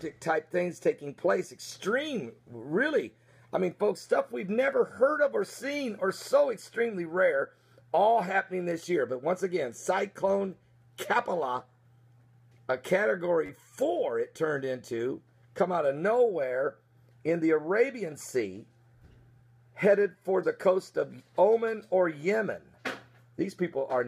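A repeated buffer fault interrupts the audio at 13.46 to 13.49 s. The same 10.67 ms slice plays three extra times back to back, which fits a 512-sample buffer being replayed while new audio failed to arrive in time. Because each repeat is so short, it comes across as a click or brief buzz with hard joins rather than a clear stutter. Unlike a dropout, nothing falls silent and no audio seems lost.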